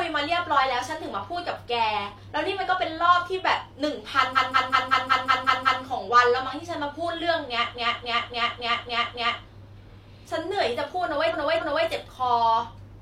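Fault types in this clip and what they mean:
Repeated frames: a short block of encoded audio was written or delivered more than once, so the decoder replays it and the speech stutters in place. At 4.32 s a 0.19 s block plays eight extra times, adding 1.49 s. At 7.71 s a 0.28 s block repeats six times, adding 1.67 s. At 11.29 s the same 0.28 s length returns twice more, adding 0.56 s. The clip runs about 3.7 s longer than the original.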